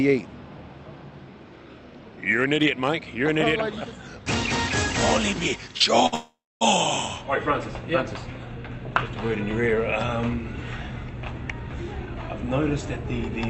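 Audio carried over a call path with Opus coding, its bandwidth topping out near 8 kHz. Two short stalls from a late packet occur, at 5.77 to 5.82 s and 6.06 to 6.14 s. Each time a packet missed its slot and the jitter buffer emptied. The receiver held the last sound until the packet landed, about 29 ms the first time and 61 ms the second. Nothing is lost. The sound just hangs briefly, with a faint buzz or dip. The second stall runs straight into a call audio freeze from 6.14 to 6.63 s. Here the last sound carries on as a fading buzz, then drops to silence for about 250 ms. The audio then resumes exactly where it stopped. In total 465 ms of gap is inserted and nothing is skipped. The likely cause is packets held up in the network long enough to drain the buffer again. From 11.38 to 13.31 s a jitter buffer speed-up follows. The buffer was holding more audio than its target. The receiver trimmed tiny slices, each a pitch period or a few, over and over, removing roughly 150 ms. 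Playback runs at about 107% speed with pitch unchanged, so this stretch sounds slightly hurried.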